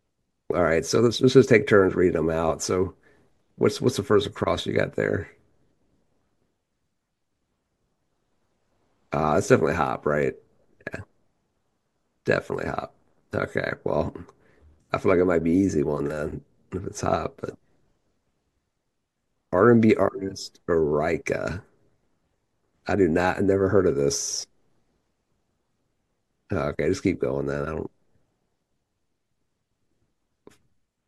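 A recording of speech, with no technical faults to be heard anywhere in it. No dropouts, distortion or other problems appear at any point.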